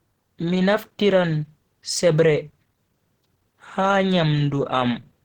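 A speech recording with plainly audible Opus compression damage running through the whole clip. The voice has a muffled, hoarse quality with a grainy roughness, which points to the encoder's hybrid speech mode at a low rate. The rate is likely around 16 kbps. Unlike MP3 damage, there is little swirling or watery hollowness, because the gaps are filled rather than left empty. The bandwidth still extends to about 20.1 kHz.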